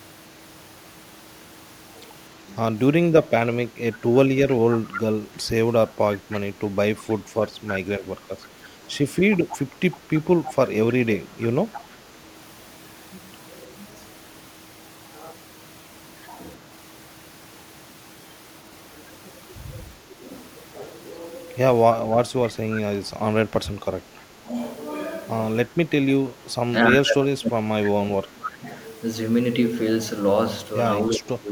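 Echo leak, 4.24 to 6.4 s: a delayed copy of the speech trails it by 318 ms, about 10 dB below the direct sound. The likely cause is a far-end echo canceller that failed to remove its loudspeaker's pickup and sent it back.

Speech suppressed in double talk, 5.18 to 5.98 s: while that echo overlaps, the speech dips by up to about 10 dB in short pieces. With both sides active, the canceller likely mistook the talker for echo and turned it down.

The same suppression returns from 8.25 to 11.54 s, again clipping up to about 10 dB off the speech in scattered fragments totalling roughly a second. Echo leak recurs from 9.51 to 11.94 s at the same 318 ms delay, now about 15 dB down.

Further double-talk suppression is heard at 19.99 to 20.24 s and 23.81 to 24.54 s as brief dips of about 5 dB. It is heavier at 26.33 to 28.69 s, where the speech falls by up to about 30 dB for around two seconds in total. 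From 31.1 s to the end of the clip, it drops by about 20 dB.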